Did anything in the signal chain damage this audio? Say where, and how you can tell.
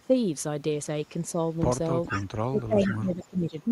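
Yes. Echo leak appears at 2.06 to 2.27 s and again at 2.84 to 2.96 s, a delayed copy of the speech trailing the original by 423 ms, first at about 10 dB below the direct speech and then at about 20 dB below. The fixed delay points to call processing at a far end listening on a loudspeaker. Its echo canceller likely failed to subtract everything its microphone caught, so the residue was sent back down the line.

Speech suppressed in double talk affects 2.51 to 3.57 s, also in call processing. The speech level sags unevenly over roughly a second, with the deepest dips reaching about 20 dB. The second echo burst falls inside this span, which supports the diagnosis. With both ends active, the canceller likely could not tell the local talker from loudspeaker echo and attenuated everything together, pulling the wanted speech down with the echo.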